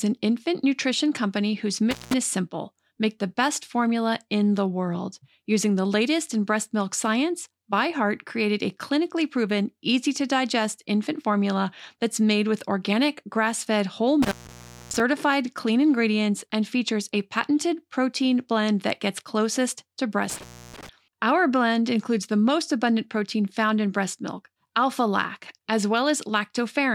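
At 1.91–2.14 s, 14.22–15.00 s and 20.30–20.89 s the speech drops out through intermittent contact: a loose connection briefly opens, for about 178 ms, 598 ms and 296 ms respectively. Each break starts and ends with crackle, and faint hiss remains in between. On a waveform the signal collapses to a near-flat line framed by sharp spikes. A spectrogram shows thin broadband vertical streaks at each edge around a dark, nearly empty gap.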